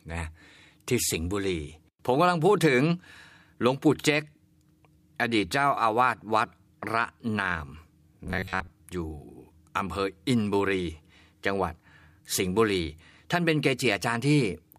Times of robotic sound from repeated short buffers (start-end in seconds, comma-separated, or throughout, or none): 8.25-8.70